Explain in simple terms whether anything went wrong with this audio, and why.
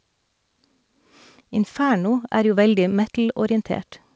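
Nothing went wrong here: the speech came over an ordinary internet call link whose G.722 codec leaves out everything above 8 kHz, which is how that link is designed to work.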